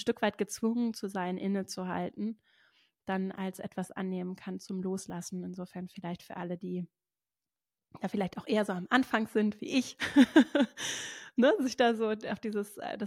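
At 3.38 s, just before "etwas annehmen kann zum", and again at 5.1 s, right after "etwas annehmen kann zum", the speech jumps forward with no gap. Each is likely a dropped buffer (overrun), losing roughly 20 ms overwritten before capture.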